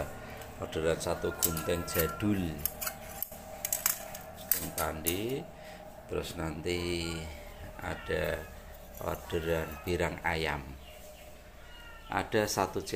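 No technical faults are audible anywhere in the audio.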